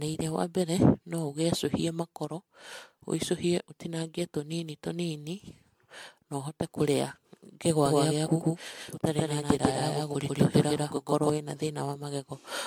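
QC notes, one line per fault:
Throughout, generation loss: the audio has a swirly, smeared, hollow quality, with blurred consonant attacks and a spectrum that stops dead at 19.9 kHz. That is worse than a single encode at around 100 kbit/s would give. The likely cause is repeated MP3 decoding and re-encoding, around seven passes. Each pass quantises on a shifted frame grid, so its noise and spectral holes stack on top of the previous ones rather than repeating them.
7.86 to 11.30 s, doubled audio track: a second, full-band copy of the speech runs roughly 150 ms behind the first at about the same level. This gives a hard slapback with no decay or room colouring. It switches in and out abruptly at both ends. The likely cause is the same signal arriving twice through paths of different latency, or two offset copies left on the timeline, which is why the echo is so clean and fixed.
10.96 s, block of digital silence: a 1.45 ms drop to silence, heard as a single tick, falling inside the doubled section. 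The output cuts to silence and back with no fade. The length points to one 64-sample buffer going unfilled in time, or a calculation yielding invalid values that were zeroed.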